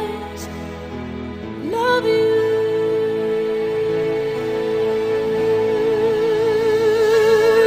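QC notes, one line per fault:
No faults heard.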